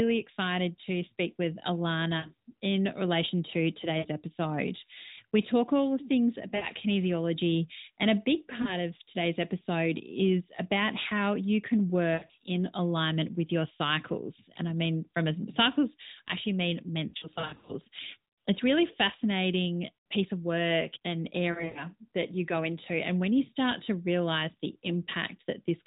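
Brief dips and warbles, some stretched into a smeared, fading buzz, break the narrowband speech at 2.18, 3.98, 6.56, 8.62 (between "and a big" and "of today's episode is"), 12.14, 17.08 (after "cycles I actually mean") and 21.52 s. These are lost AMR speech frames. Corrupted frames were replaced by the decoder repeating the last good settings at falling gain. The worst stretch is 17.08 to 17.73 s, where losses are scattered across 0.6 s.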